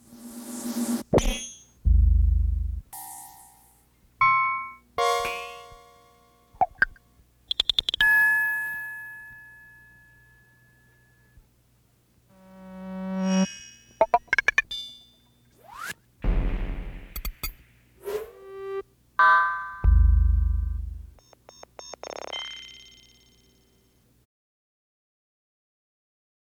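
Nothing here sounds wrong: the audio runs along without trouble, and the gentle fade-out beginning around 24 s and finishing at 24.26 s is just a smooth editorial ending.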